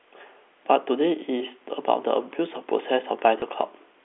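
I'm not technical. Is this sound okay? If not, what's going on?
No. At 3.40 to 3.42 s there is packet loss with the last packet repeated. One 20 ms chunk went missing, and the previous chunk replayed, causing a small blip. The clip has telephone-quality sound.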